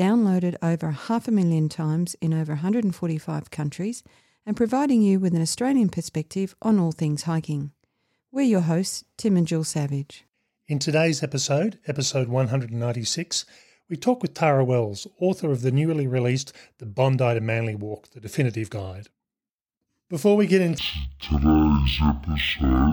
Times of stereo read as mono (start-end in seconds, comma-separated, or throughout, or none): 20.78-22.93